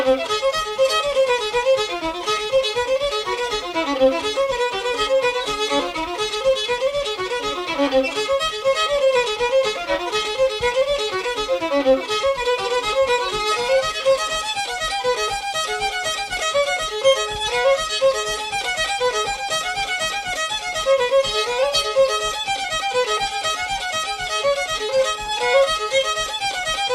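Nothing in this one trips any alarms, with no audible faults turning up anywhere along the way.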